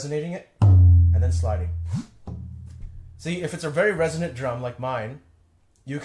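No technical fault can be heard anywhere in the sound, which keeps a steady, unbroken signal throughout.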